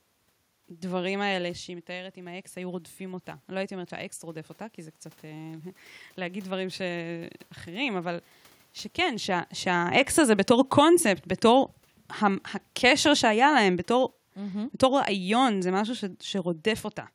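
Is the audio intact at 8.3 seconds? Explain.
No. At 8.3 s the clip is at the tail of an automatic gain rise that runs from 0.68 to 8.32 s. After the talker moved away around 1 s, the input fell by about 14 dB, and the gain control slowly raised its gain by about 7 dB to compensate. What distinguishes this from the talker simply moving is that the room noise swells along with the voice, because the whole signal is being amplified, not just the voice at the microphone.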